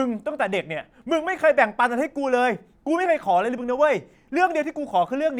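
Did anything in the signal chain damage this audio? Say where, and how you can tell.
No, nothing in the chain damaged it.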